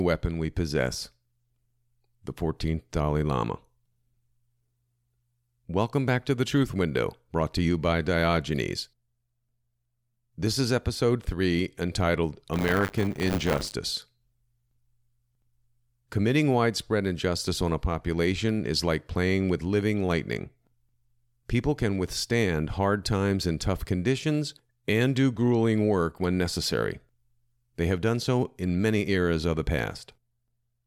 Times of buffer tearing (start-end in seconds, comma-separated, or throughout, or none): 12.53-13.73